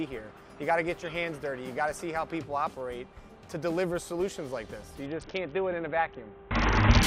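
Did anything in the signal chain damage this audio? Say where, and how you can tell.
Yes, at the codec stage: a Bluetooth SBC bit pool drop from 5.06 s to 7.03 s. The treble goes dull and a gritty noise appears, which fits the bit pool falling from 28 to 6 (about 60 kbps). Starved of bits, the upper sub-bands get little or nothing and the rest are coarsely quantised.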